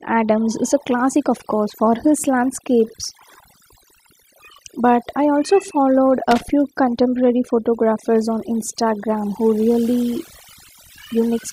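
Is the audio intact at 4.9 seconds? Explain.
No, overdone noise removal runs throughout, a reduction set too hard that shuts off bands near the noise estimate, leaving twinkling near-silence and taking quiet parts of the voice with it.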